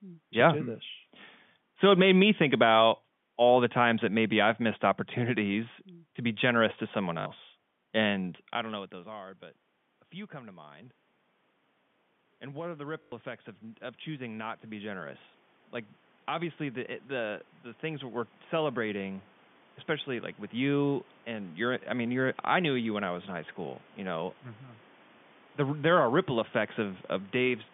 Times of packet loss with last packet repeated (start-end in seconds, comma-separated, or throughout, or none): 7.20-7.26, 13.02-13.12